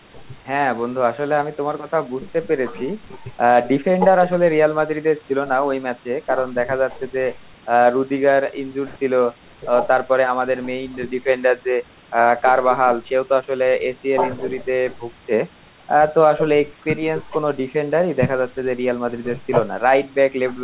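No technical faults can be heard in this speech; the signal carries nothing above 4 kHz, which fits a narrowband telephone codec such as G.711 A-law at 64 kbps, and the lowest bass is trimmed by the call's microphone processing.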